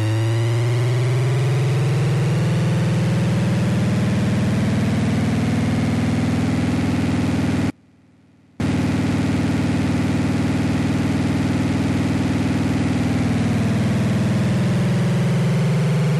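Everyday sound recording with an audio dropout to a faint residue from 7.7 to 8.6 s. For about 0.9 s the sound collapses abruptly to a faint trace of itself, roughly 35 dB below its normal level, then returns mid-flow. That leftover trace is what separates it from a full dropout to silence. The hard edges at both ends rule out a natural pause or fade. The likely cause is a momentary loss of the signal feed while the downstream path stayed live.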